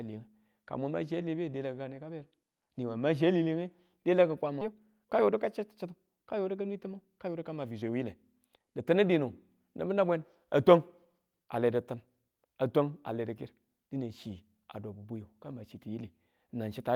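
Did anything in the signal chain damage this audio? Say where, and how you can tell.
Yes. At the network and jitter-buffer stage, a skip ahead occurs at 4.61 s. About a second of speech was discarded, either lost in transit or dropped when the buffer overflowed while later packets were already queued. Playback jumps straight from one side of the hole to the other with no fill, so the speech lurches forward mid-flow. The abrupt splice and the missing stretch give it away.

Right after that, the receiver's jitter buffer speed-up engages twice, once from 4.73 to 6.08 s at about 107% and again from 6.51 to 8.99 s at about 108%. The buffer was holding more audio than its target, so it trimmed short pitch-period chunks again and again, shedding about a tenth of a second and then about a fifth. The speech sounds hurried while its pitch stays unchanged.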